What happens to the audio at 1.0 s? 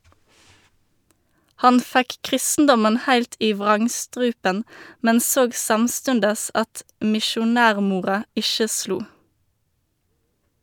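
Nothing goes wrong at 1.0 s; the speech runs on intact through that moment, with no dropout, click or distortion.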